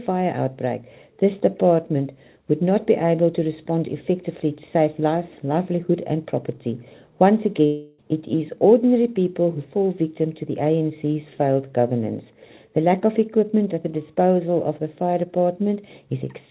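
From 7.66 to 8.00 s the sound smears into a fading buzz, about a third of a second of the last bit being stretched out, then picks up again with that chunk simply gone. That's likely a long network dropout, concealed by a band-limited call codec that stops at 4 kHz.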